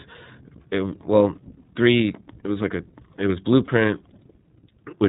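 Throughout, the speech has passed through the iLBC codec, a narrowband VoIP coder that codes each frame's excitation independently and discards everything above 4 kHz. The damage is plainly audible: the speech sounds boxed-in and dull, with a slightly rough, synthetic texture on vowels and consonants. That level of coarseness points to the 15.2 kbps mode, which works in 20 ms frames.

From 3.66 to 3.70 s, lost iLBC frames cause a brief dropout. A packet failed to arrive, and the decoder filled roughly 20 ms, consistent with a single missing frame, by repeating the last pitch cycle blended with noise. It comes across as a tiny held, faintly buzzy smear in place of the real sound. Because iLBC frames don't depend on their predecessors, the speech snaps back cleanly straight afterward.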